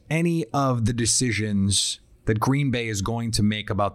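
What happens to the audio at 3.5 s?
Nothing goes wrong at 3.5 s: the speech carries on cleanly, with no dropout, click, distortion or other fault at that moment.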